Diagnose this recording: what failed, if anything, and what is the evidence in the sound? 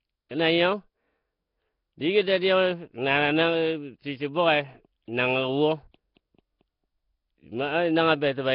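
Throughout, the speech sounds hissy and smeared, as if underwater, with nothing above 5.3 kHz. This is likely Nellymoser compression at the codec stage, filling starved bands with noise.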